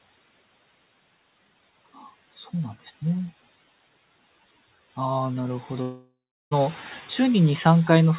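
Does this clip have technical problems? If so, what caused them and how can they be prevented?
Yes. From 5.82 to 6.53 s the speech breaks off. For about 0.7 s nothing new is heard: the last sound is stretched into a buzzy tail that fades, then roughly the final 0.37 s is silent before speech resumes with that stretch missing. This pattern points to a long network dropout, likely caused by packets failing to reach the receiver, which then concealed the gap by extending earlier audio until it gave up. Prevent it with a more stable connection, such as wired rather than congested Wi-Fi, and by enabling forward error correction or redundancy on the call.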